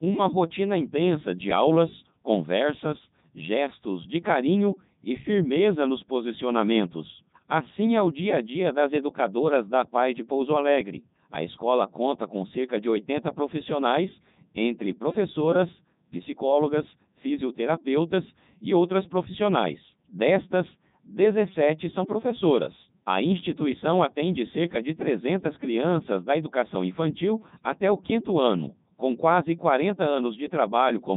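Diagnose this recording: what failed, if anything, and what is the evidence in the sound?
The failure is at the codec stage: the speech has passed through the Codec 2 vocoder for its whole length, and the damage is heavy. It sounds robotic and buzzy because the decoder rebuilds the speech from sine waves using only pitch, voicing, energy and a spectral envelope, discarding the original waveform. The upper limit fits the 3.2 kbit/s mode. A spectrogram shows evenly spaced synthetic harmonics and nothing above 3.8 kHz, and the waveform looks regular but no longer matches natural speech.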